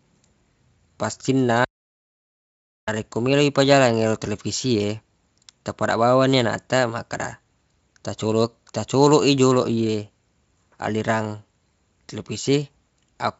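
From 1.65 s to 2.88 s the speech drops to dead silence for about 1.2 s, an audio dropout to silence, before resuming on "melo le pajalang ero". Likely the input was lost while silence kept being written.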